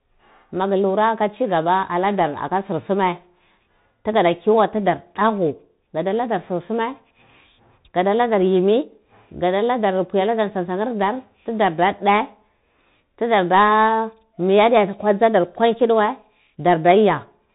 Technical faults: Bluetooth CVSD headset codec

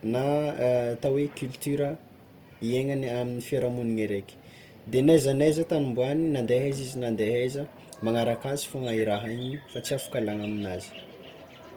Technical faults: Opus compression

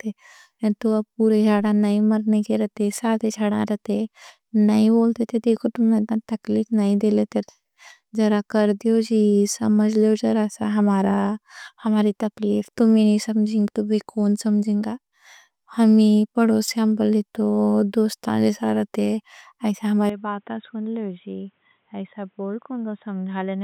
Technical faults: input switched to a poorer device

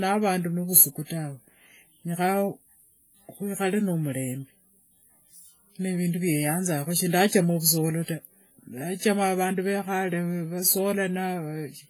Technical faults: WMA compression

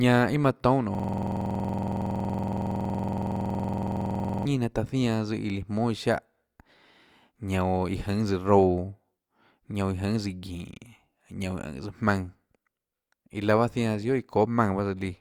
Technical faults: system hang loop

